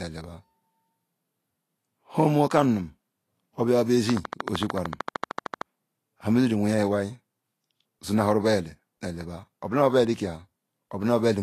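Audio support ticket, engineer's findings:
Whole clip: grainy, hissy treble, roughened speech, smeared consonants, nothing above 14.2 kHz. Likely Vorbis compression at a low setting, consistent with around 34 kbps. Top band cut off and treble residue quantised so coarsely it turns to noise.

4.10–5.62 s: regular ticking, about 13.2 per second, some twenty clicks, peaks about 15 dB over the speech. Train of clicks, likely from interference or a faulty connection injecting repeated same-shape pulses.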